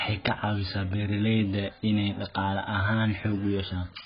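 Throughout, the speech is dull and smeared, with nothing above 5.1 kHz and a fizzy warble, likely from heavy AAC compression at a bitrate near 12 kbps.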